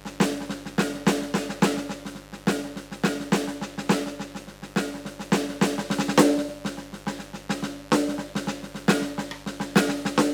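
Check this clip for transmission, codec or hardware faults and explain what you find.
The music carries one hardware fault: mains buzz for the whole clip. Switching spikes from a 50 Hz supply leak in twice per cycle, stacking harmonics up into the kilohertz range. It sits around 20 dB below the music as a constant, raspy buzz.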